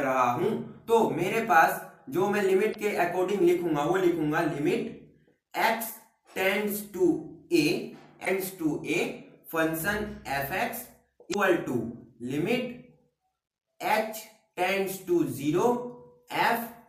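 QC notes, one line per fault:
2.71–2.76 s, 8.22–8.28 s and 11.30–11.36 s, damaged data in a compressed stream: three short blips, each lasting just under 60 ms. In each spot, some bytes in the encoded stream got corrupted, so the decoder either misread those frames or dropped them. It loses its place, scans ahead for the next valid frame header and picks up from there. That brief garbled stretch comes through as a little chirp or squawk.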